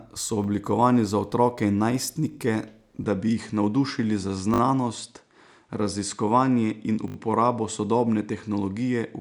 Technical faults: repeated buffer; input switched to a poorer device

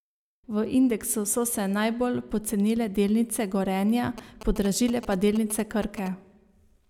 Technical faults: GSM signalling bursts

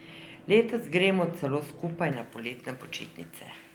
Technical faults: pre-emphasis left on

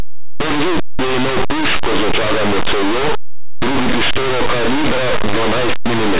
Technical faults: linear audio read as companded

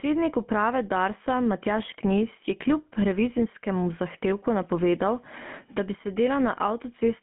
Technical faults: gain pumping; GSM full-rate codec

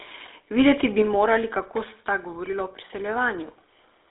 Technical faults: GSM full-rate codec

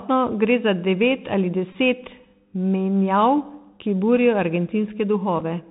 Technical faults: Bluetooth CVSD headset codec; Bluetooth headset packet repeated

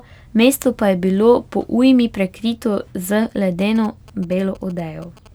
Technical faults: GSM signalling bursts

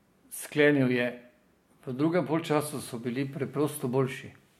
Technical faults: none

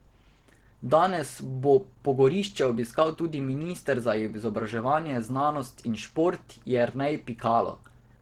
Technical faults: Opus compression

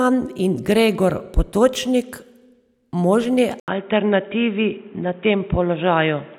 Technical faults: input switched to a poorer device

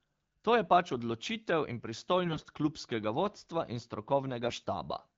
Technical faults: AMR bit errors

